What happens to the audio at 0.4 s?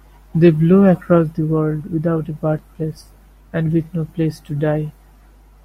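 Mains hum is present at 0.4 s, as it is for the whole clip: a ground loop or nearby transformer is leaking the 50 Hz power line into the signal, leaving a steady low drone with some low harmonics sitting roughly 30 dB beneath the speech.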